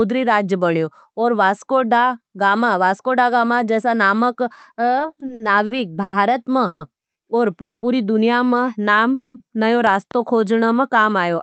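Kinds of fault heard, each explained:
Repeated stalls (stutter): Between 4.99 and 6.15 s the sound hitches eight times, with no gap longer than 100 ms. The jitter buffer kept running dry because packets arrived late or too slowly, and the receiver stretched the last bit of sound each time. About a fifth of that stretch is filler, and nothing is lost. On a spectrogram, the harmonics smear into short, flat, repeated bands. The waveform shows a choppy, drawn-out envelope.
Call audio freeze: At 6.67, 7.61 and 9.14 s the sound hangs for 140, 220 and 200 ms. The last sound continues as a fading buzz, then picks up exactly where it stopped, so nothing is missing and everything after is pushed later. The likely cause is packets held up in transit, emptying the jitter buffer. The 7.61 s freeze, just before "दुनिया में", decays into about 210 ms of near-silence, seen as a tapering tail and then a flat waveform. 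On a spectrogram it is a blank band.
Loud pop: Two sharp pops land between 9.87 and 10.13 s, peaking about 5 dB above the surrounding speech, which carries on underneath. The likely cause is a sudden voltage step or pulse from a plug, switch, static or driver glitch, shaped by the circuitry after it. On the waveform they are narrow spikes standing clear of the speech envelope. On a spectrogram they are thin vertical broadband lines.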